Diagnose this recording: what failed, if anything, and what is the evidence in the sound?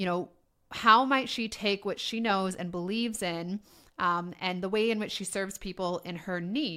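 No failure detected in this recording.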